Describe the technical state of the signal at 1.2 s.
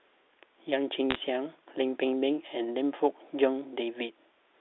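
Bit errors on a digital phone line run from 1.11 to 1.18 s, the edge of this moment. Bits in the G.711 mu-law stream, somewhat under one percent, are flipped, each corrupting a single sample, so sharp ticks and crackle sit over otherwise unchanged narrowband speech.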